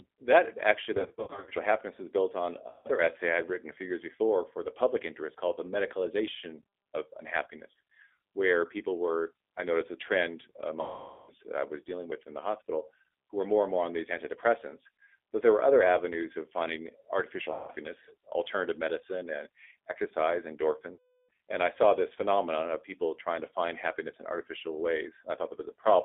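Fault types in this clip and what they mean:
G.729 codec: The speech sounds narrow, slightly rough and synthetic throughout, with the band limited to roughly 300 Hz to 3.6 kHz. This fits a G.729A-style 8 kbit/s coder that rebuilds each short frame from a vocal tract filter, pitch predictor and a few pulses.
VoIP packet loss concealed by the speech codec: Five stretches turn buzzy or smeared and fade before recovering, the heaviest near 10.8 to 11.3 s. Lost packets, about 150 to 470 ms' worth each time, were filled by the decoder extrapolating its last pitch and filter at decreasing gain.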